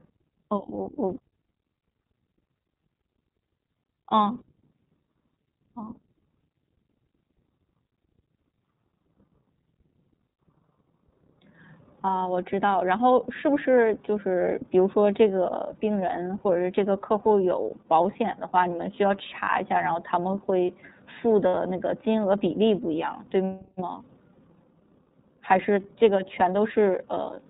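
Throughout, the speech passes through the iLBC codec, a narrowband VoIP coder that models each frame's excitation independently. Everything above 4 kHz is gone, and the voice carries a plainly audible rough, synthetic edge, consistent with the 13.33 kbps, 30 ms frame mode.

At 2.6 s and again at 21.48 s, lost iLBC frames leave the decoder to conceal gaps of about 60 ms, consistent with two missing 30 ms frames. It repeats the last pitch cycle blended with noise, so each gap becomes a brief held, buzzy vowel before the voice snaps back.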